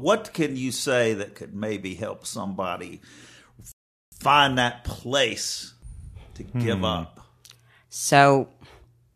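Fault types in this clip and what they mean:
Rebuffering stall: playback starves for data and halts at 3.72 s, leaving 0.4 s of silence before "find that place" resumes intact, unlike a dropout, which loses audio.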